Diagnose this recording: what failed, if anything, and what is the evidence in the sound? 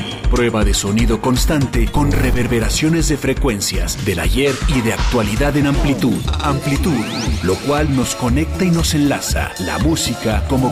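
A train of clicks runs from 8.76 s to 10.64 s: a regular ticking at about 6.4 per second, roughly fifteen pulses, each near the level of the sound itself, so they sit right on top of it rather than hiding underneath. They're all much the same shape and evenly spaced, which points to something periodically injecting a pulse, most likely interference picked up in the analogue wiring from nearby equipment, or a faulty connection or power supply.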